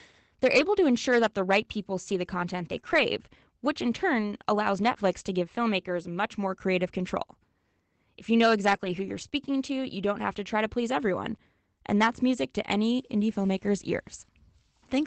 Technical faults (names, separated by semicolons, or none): lost packet rebuilt from error correction; short concealed packet loss